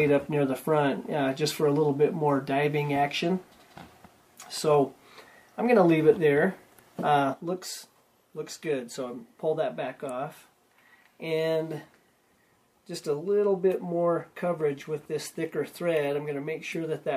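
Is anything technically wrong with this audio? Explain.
Yes, there is one fault. At 7.34 s a sudden gain jump drops the whole level by about 7 dB and it stays down to the end. It is likely a gain setting applied between adjacent samples with no ramp. Sound and background noise fall together, showing as an abrupt step in the waveform envelope and a uniformly darker spectrogram from that point.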